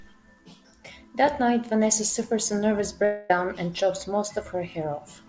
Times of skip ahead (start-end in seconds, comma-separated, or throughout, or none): none